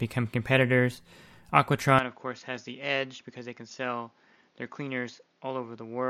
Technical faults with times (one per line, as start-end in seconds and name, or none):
1.99-6.10 input switched to a poorer device